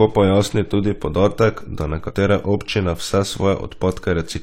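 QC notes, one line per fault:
2.05–2.11 s, damaged data in a compressed stream: A burst of corrupted audio lasts about 60 ms, right after "podatek da" and before "občine vse". It comes through as a brief glitch cutting into the speech. Bytes in the compressed stream were wrong at this point. The decoder could not read those frames properly, lost sync, and hunted for the next valid frame header. The garbled output during that search is the blip.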